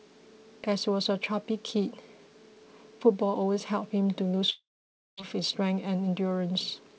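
From 4.50 s to 5.19 s the speech is likely broken by a long network dropout, where packets stopped reaching the receiver for about 0.68 s. The receiver covers the gap by stretching the last sound into a brief fading buzz or hiss, then leaves near-silence for about 0.56 s before the speech resumes further on, missing the lost portion. Throughout, the G.722 call path at 64 kbps leaves nothing above 8 kHz.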